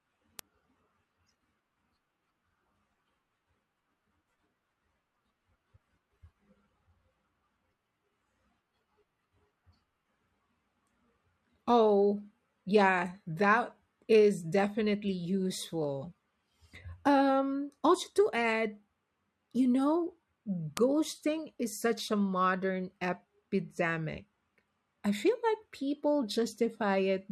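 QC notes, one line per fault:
0.39 s and 20.77 s, bit error spike: two isolated sharp ticks, each reaching about -9 dBFS, one lasting a single sample and the other three samples. A flipped bit jumps the sample value and snaps straight back, so each tick is full-band and unrelated to the speech, unlike a dropout or splice, which would leave a gap or a seam.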